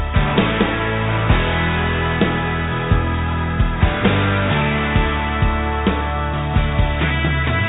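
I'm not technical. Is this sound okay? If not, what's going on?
Yes, nothing has gone wrong here. It has travelled over a normal call connection with a standard phone codec, so it sounds a bit narrow and phone-like because nothing above about 4 kHz gets through, which is ordinary for that kind of line.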